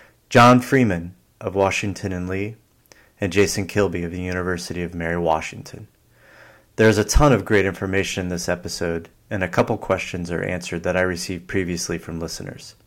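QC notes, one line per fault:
0.36–0.78, 1.60–1.67, 3.37–3.79, 5.30–5.33, 6.81–7.60, 7.97–8.01, 9.58–9.93 and 10.98–11.01 s, hard clipping: the speech peaks overrun the available level by about 1 to 3 dB and are sheared flat. The squared tops generate high-order harmonics, heard as a brief crackly edge on the loudest syllables.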